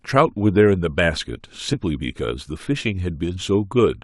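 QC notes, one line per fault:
1.73–1.77 s, compressed frames skipped: the speech jumps forward here, losing something like 70 ms, roughly seven frames' worth if the codec runs 10 ms frames, which is what the jump size suggests. Those frames either went missing or the decoder rejected them as corrupt.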